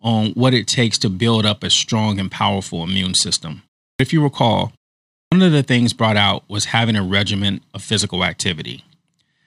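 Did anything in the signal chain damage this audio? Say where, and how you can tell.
Yes, at playback: a clipped start after a pause. At 3.93 s, after a 0.33 s gap, "if you recall" begins abruptly with about 65 ms of its onset missing. At 5.25 s, after a 0.56 s gap, "of the things brought" loses about 68 ms the same way. The output device idles in silence and needs time to wake before it passes audio again. Muted pauses would only drop background; here the opening sounds are actually gone.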